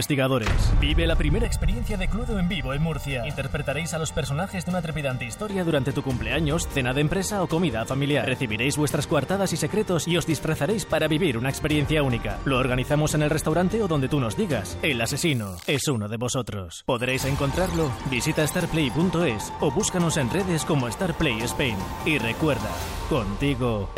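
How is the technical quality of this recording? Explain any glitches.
The recording has one clear glitch, a stretch of channel delay (comb filtering). It runs from 1.45 s to 5.50 s. One channel arrives late by roughly 1.5 ms. When the two channels are combined, the shared content partly cancels at evenly spaced frequencies. The first notch sits around 300 Hz, and further notches repeat up the spectrum. The sound turns hollow and phasey for those four seconds, then returns to its fuller tone.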